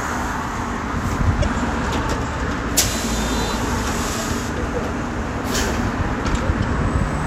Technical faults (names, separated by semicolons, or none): damaged data in a compressed stream